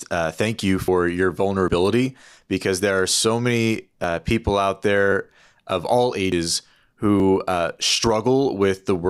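The speech skips forward at 0.88 s after "uh thank you", 1.68, 4.04 (before "people out"), 6.32, 7.2 and 8.04 s, losing roughly 40 to 100 ms each time with no gap. This likely points to a dropped buffer (overrun), where unread samples were overwritten.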